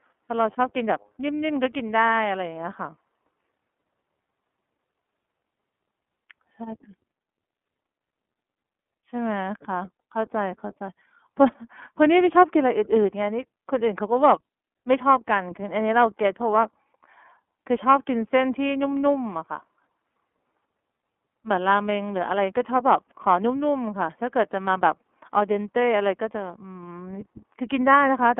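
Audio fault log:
Throughout, iLBC codec: the speech is squeezed into a narrow telephone band, roughly 250 Hz to 3.4 kHz, so there's no air or sparkle up top and not much body down low. The coding damage is plainly audible, a rough, slightly synthetic grain on the voice. It comes from each 30 ms frame's excitation being coded on its own, with nothing carried over from the frame before, at a rate that fits about 13 kbps.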